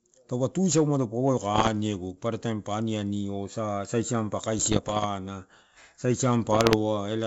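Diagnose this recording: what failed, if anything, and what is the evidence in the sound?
The failure is bit errors on an ADPCM link, in the transmission stage of a G.722 wideband call that points to the 64 kbit/s mode. Pops and rough bursts come at 1.54 to 1.69 s, at 4.59 to 5.06 s just after "aniani osa siampa", and at 6.45 to 6.75 s. The error rate is around one to two percent. Each flipped bit throws off the decoder's step size and predictor. The damage rings on briefly, with short jumps in level.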